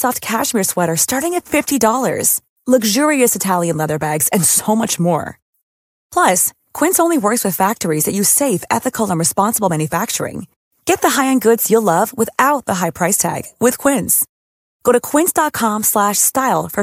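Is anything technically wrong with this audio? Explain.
No, nothing is technically wrong with this speech recording. No faults can be heard anywhere in it.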